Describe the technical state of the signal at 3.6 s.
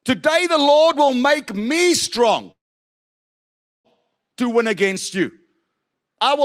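At 3.6 s the signal sits inside a call audio freeze running from 2.51 to 3.88 s. It is silent there: the held sound has already died away. Delayed packets likely drained the jitter buffer, and playback then resumes where it stopped, adding about 1.3 s of delay.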